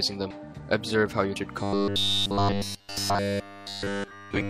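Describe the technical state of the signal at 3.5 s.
At 3.5 s, robotic sound from repeated short buffers is present from 1.63 s to 4.50 s, likely from starved input where the same roughly 10 ms chunk repeats throughout, forcing a rigid 100 Hz metallic buzz.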